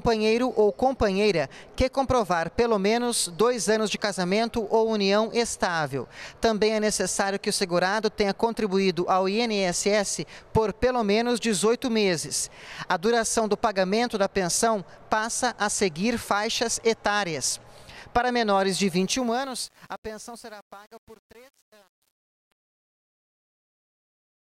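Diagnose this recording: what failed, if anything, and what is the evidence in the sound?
From 18.96 s the fade-out turns gritty, worst from 19.42 s to the end: truncation distortion at the sample-format stage, with the fade reduced to about 8 bits without dither.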